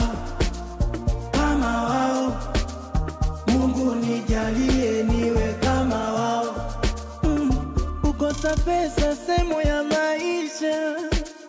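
No technical fault can be heard anywhere in this audio. Nothing in it breaks up, drops out or changes character at any point.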